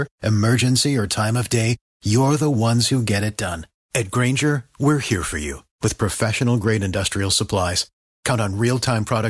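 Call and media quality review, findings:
No faults found on review of the speech recording. No component flagged for follow-up.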